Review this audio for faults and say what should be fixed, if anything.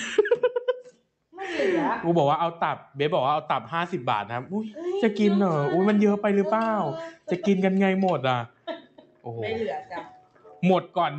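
A noise suppressor applied to music or sounds stays active throughout, treating sustained tones and tails as noise. Level swings by about 5 dB, pumping with steadiness rather than loudness, unlike a compressor.

The noise suppressor cut the sound hardest from 8.48 to 9.27 s and from 10.04 to 10.62 s, with drops of about 12 dB. Attacks survive while decays are cut short, which rules out dropouts.

The Opus call path band-limits the audio to about 8 kHz, but that is expected behaviour.

To prevent both problems, disable speech noise suppression or switch it to a music mode whenever the source is not speech.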